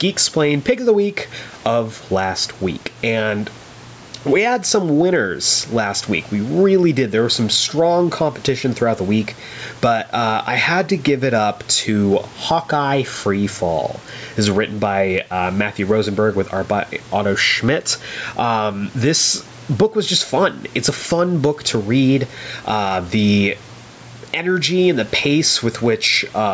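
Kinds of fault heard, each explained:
gain pumping: Throughout the speech, the level lurches by about 10 dB, with loud and soft parts squashed together. The likely cause is gain set far too high, with a fast limiter clamping down.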